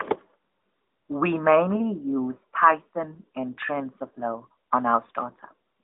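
No technical faults are audible.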